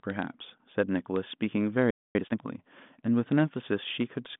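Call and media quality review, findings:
Playback stall at 1.90 to 2.15 s: speech cuts out mid-flow for about 240 ms, then resumes. Likely the player ran dry or its output thread got blocked. Nothing reached the output until the buffer refilled or the thread woke up.

Time-compressed catch-up at 2.15 to 2.39 s: speech runs at 2x speed, pitch unchanged. The player is trimming its backlog by cutting small chunks and cross-fading the joins. The 40 kbit/s G.726 line band (150 Hz to 3.6 kHz, nothing above 4 kHz) carries through this stretch unchanged.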